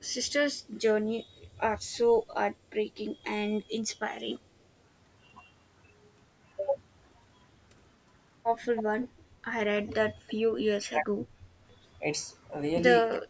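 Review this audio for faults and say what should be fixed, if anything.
Echo leak, at 0.00 to 0.31 s, 9.87 to 9.94 s and 10.27 to 10.34 s. A faint delayed copy of the speech slips back into the signal, trailing by about 346 ms in the opening burst and about 318 ms in the two short scraps near 10 s. It is weak at the start, around 35 dB below the speech, and stronger later, around 20 to 25 dB down. The likely cause is a far-end loudspeaker path whose echo canceller left residue uncancelled. Better acoustic isolation or a stronger residual echo suppressor would stop this.

Speech suppressed in double talk, at 10.65 to 11.32 s and from 13.10 s to the end of the clip. The speech level falls sharply, by roughly 35 dB in the first stretch and about 40 dB in the final fragment, as though gated out. This likely happens because, with both sides active, the echo canceller could not tell the local talker from loudspeaker echo and attenuated everything. 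Tuning double-talk detection to keep near-end speech at full level would prevent it.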